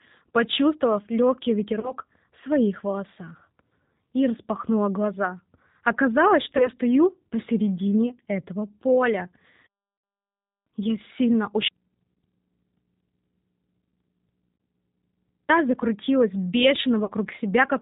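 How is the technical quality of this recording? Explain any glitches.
The recording is speech carried over a low-bitrate VoIP link, and it is noticeably degraded throughout, with several brief concealment glitches and one long dropout.

The whole clip has the sound of the G.729 codec at 8 kbit/s, with plainly audible damage. The decoder rebuilds each 10 ms frame from a filter, a pitch estimate and a few pulses, and it carries nothing above 4 kHz. The result is muffled, rough and slightly synthetic.

VoIP packet loss concealed by the speech codec occurs at 1.80 s (after "почувствовав легкий", before "в своих волосах"), 6.57 s (before "стою посередине этого поля"), 9.98 s, 12.14 s, 14.57 s and 17.05 s. Each gap is about 30 ms, except the 60 ms gap at 9.98 s. The decoder extends the last pitch and filter while lowering the gain, which produces a brief buzzy or noisy smear, and the speech stays weak for a moment after each gap.

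There is an audio dropout to a faint residue from 11.68 s to 15.49 s, about 3.8 s long. The speech cuts off abruptly, and only mains hum remains, about 50 dB below the speech level. The likely cause is a loss of the signal feeding a path that stayed live.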